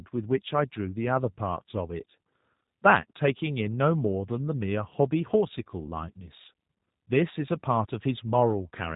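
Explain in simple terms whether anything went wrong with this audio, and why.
Throughout, the speech sounds muffled and slightly robotic. The G.729 codec caused this: it rebuilds speech from a simplified model and removes everything above 3.8 kHz.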